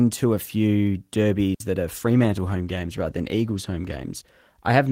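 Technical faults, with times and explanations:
1.54 to 1.60 s: digital wireless dropout. The sound cuts to near silence for about 60 ms, then returns. The wireless link lost too much data, so the receiver muted with a very short fade. No noise burst marks either edge of the hole.
1.96 s to the end: call bitrate drop. From here the speech turns rougher and more smeared. The call's bandwidth estimate fell, and the encoder went from 32 to 14 kbps. With far fewer bits, coding gets coarse, and the lowest rate lasts about 1.8 s.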